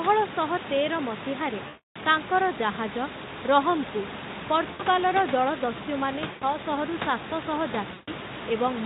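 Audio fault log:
1.67–1.96 s, 4.71–4.83 s, 6.31–6.44 s, 7.93–8.10 s: VoIP packet loss concealed by the speech codec. Gaps of 280, 80, 100 and 140 ms are filled by the decoder extending its last pitch and filter at falling gain. The sound smears into a fading buzz or coloured noise rather than dropping to silence or clicking, and stays weak briefly after each gap.
2.09–8.85 s: mains hum. A steady 60 Hz tone with low harmonics comes in at 2.09 s, roughly 10 dB under the speech, and holds to the end. Its fixed pitch and unchanging level set it apart from the room noise beneath it.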